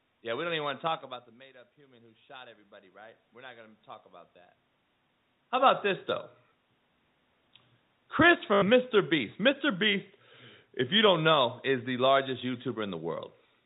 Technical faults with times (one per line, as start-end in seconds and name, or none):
1.46-3.87 automatic gain rising
8.54-8.62 packet loss with last packet repeated